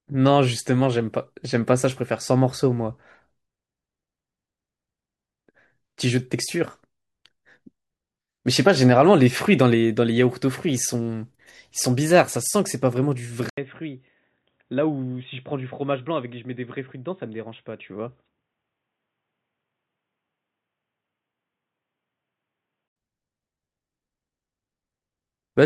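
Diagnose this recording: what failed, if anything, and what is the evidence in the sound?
Input stage, likely an input switched to a poorer device: an 80 ms dropout at 13.50 s, then boxy speech, nothing above 3.8 kHz, about 10 dB quieter, until 22.96 s.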